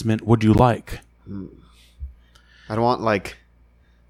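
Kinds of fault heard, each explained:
Corrupt frame decoded: flipped bits in the compressed stream were decoded as if valid, so misread gains and spectral codes put energy at the wrong frequencies for the span of each damaged frame. In this speech clip it happens twice, each time across roughly a couple of frames. A loud burst from 0.53 to 0.60 s peaks around -5 dBFS. A much fainter blip from 3.31 to 3.34 s peaks around -30 dBFS.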